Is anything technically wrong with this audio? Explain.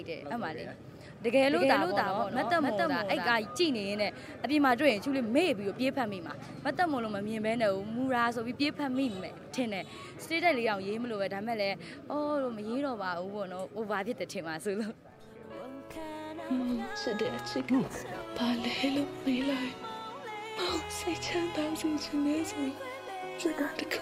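Yes. From 1.47 to 3.37 s the sound is shadowed by a second full-band copy about 5 dB quieter, trailing by roughly 300 ms with no decay or room colour, and starting and stopping abruptly. This doubled audio track likely comes from a slower second capture path or an edit holding two copies out of step.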